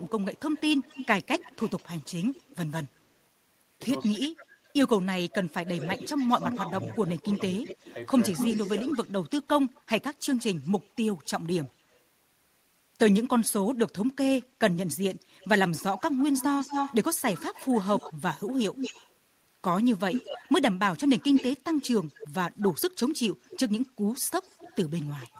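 From the start to 3.0 s a faint delayed copy of the speech trails about 204 ms behind it, roughly 25 dB down. This is echo leak: a loudspeaker-and-microphone path on one side was likely not fully cancelled, so the voice returns. Unlike room reverberation, which smears smoothly, this is a distinct repeat at a fixed lag. It returns stronger from 5.66 to 11.98 s (217 ms, about 10 dB down), 15.4 to 19.11 s (233 ms, about 5 dB down) and 20.12 to 25.39 s (243 ms, about 10 dB down). Here it is an audible second voice.

Between 4.11 and 6.44 s the speech dips in pieces, about a second in total, dropping by as much as roughly 25 dB. This is speech suppressed in double talk: with both sides active, the echo canceller likely could not tell the talker from the returning echo and attenuated both. It differs from a dropout or packet loss because the cuts follow the overlap rather than striking at random.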